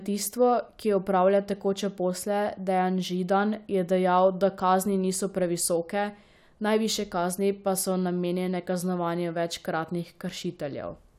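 No technical faults can be heard anywhere in this speech recording. There is nothing at any point in the audio that needs a time marked against it.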